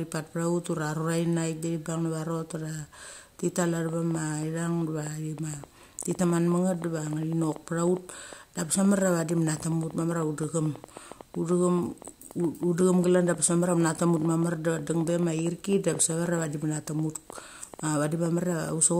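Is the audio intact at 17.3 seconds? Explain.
No, a train of clicks runs from 3.89 to 18.7 s, starting just after "thi tal". Roughly a hundred similar pulses arrive unevenly, about 6.9 per second, peaking about 5 dB above the speech, likely from nearby electrical interference or a faulty connection or power supply.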